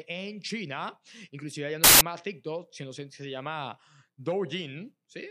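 Samples built from the wrong bytes, 1.84 to 2.01 s after "inclusive ya no": misassembled bytes make low bits dominate, producing a burst of loud, harsh broadband noise in place of the speech.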